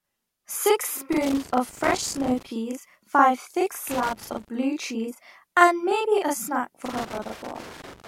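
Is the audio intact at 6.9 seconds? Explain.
No. A loose connector crackle runs from 6.85 s to the end at 8.08 s. A worn contact makes and breaks rapidly, chopping the speech into irregular scratchy crackle and pops. A channel delay (doubling) is also present throughout. One channel arrives 40 ms late and is summed to mono, so the speech sounds doubled with a short slap.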